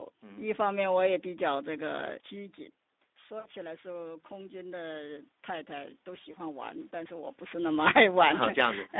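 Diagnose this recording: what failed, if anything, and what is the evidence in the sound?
Codec stage: the Speex codec is audible throughout as a hoarse, noisy texture on the speech squeezed into roughly 200 Hz to 3.7 kHz, which fits a low setting near 11 kbps.

Network stage: VoIP packet loss concealed by the speech codec at 3.39–3.48 s and 6.31–6.36 s, heard as brief buzzy or noise-like, fading smears while the decoder extrapolated the missing frames.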